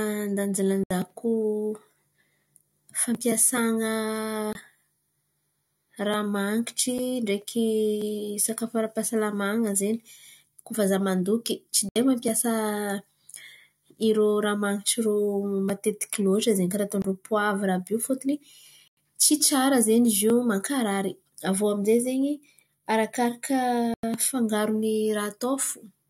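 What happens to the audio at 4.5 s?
At 4.53 s the speech drops into a block of digital silence lasting about 23 ms, ending at 4.55 s. A run of samples has been replaced by zeros. This most likely happened because the output buffer was not filled in time, and the length fits a 1024-sample buffer. The sound cuts to zero and back with no fade. The gap is heard as a short hole.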